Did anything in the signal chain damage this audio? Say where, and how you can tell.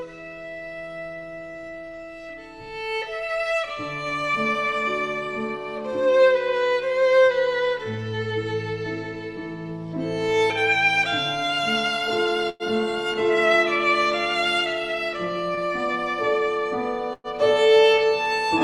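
Yes. The damage happened at the network stage, where the receiver's jitter buffer ran empty.

Call audio freeze, at 12.49 to 12.63 s and again at 17.13 to 17.27 s. At each point the last sound carries on as a fading fill for about 104 ms and 108 ms respectively. The second fill trails into roughly 20 ms of silence. The sound then resumes exactly where it stopped, so nothing is lost and the timing shifts later by the length of the fill. This points to packets that were likely held up in transit.

Short stall from a late packet, at 15.55 to 15.60 s. Here the sound is held for about 25 ms before continuing from the same place, with nothing missing. One packet was not there when it was due, so the receiver stretched the last sound until the packet arrived. That pushed everything after it about 25 ms later.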